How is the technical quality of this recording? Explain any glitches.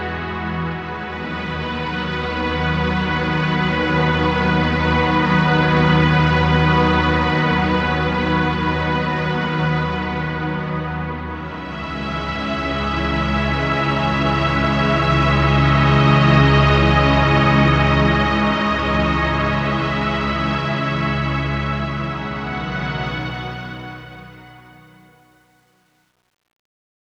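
The ending has one glitch. Truncation distortion on a fade runs from 23.05 s to 27.10 s: the fade-out, beginning around 23 s, passes through a stage keeping too few bits, consistent with roughly 10-bit resolution, without dither. The waveform collapses into coarse steps, so from 24.09 s to 27.11 s the tail turns gritty.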